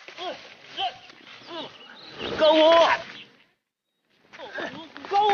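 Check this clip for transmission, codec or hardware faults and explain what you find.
No transmission, codec or hardware faults are audible here.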